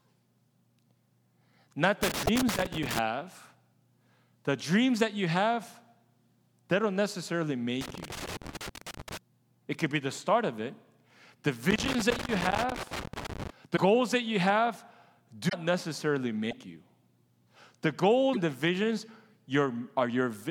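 From 2.03 to 2.99 s, loose connector crackle breaks in as irregular scratching. A worn contact is making and breaking, and that chops the signal. Inside that stretch, from 2.26 to 2.29 s, the sound skips. The crackle returns from 7.81 to 9.17 s and again from 11.71 to 13.5 s. More short skips follow at 13.76 to 13.78 s, 15.48 to 15.54 s, 16.50 to 16.53 s and 18.33 to 18.37 s. Each lasts about one or two 26 ms frames. The likely cause is a broken MP3 bit reservoir. Frames were lost, and the next frame read its borrowed data from the wrong bytes.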